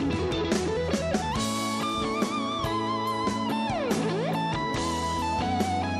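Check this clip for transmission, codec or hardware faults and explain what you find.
Nothing to report: no dropouts, glitches or device faults are audible anywhere in the clip.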